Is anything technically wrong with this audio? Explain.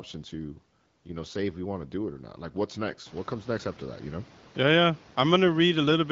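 No, nothing stood out as technically wrong on listening to this speech clip.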